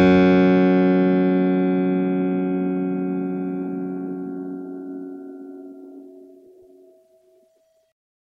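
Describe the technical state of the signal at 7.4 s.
At 7.4 s the music plays through intact, with no audible fault in the signal at that point.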